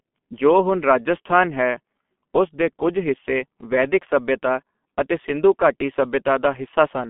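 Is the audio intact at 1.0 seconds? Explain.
No. At 1.0 s the speech carries G.723.1 codec damage, present throughout the clip. Long 30 ms frames and a very low bitrate, consistent with about 6.3 kbit/s, leave a narrow line band of 200 Hz to 3.4 kHz with nothing above 3.6 kHz. The result is muffled, hoarse speech with smeared consonants.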